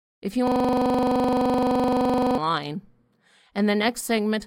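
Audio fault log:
0.47–2.38 s, system hang loop: one 42.67 ms slice of speech repeats exactly, back to back, for nearly two seconds. The 23.4 Hz repeat rate gives a rattling buzz, which fits a frozen 2048-sample ring buffer. Unlike dropouts, there are no gaps or silence.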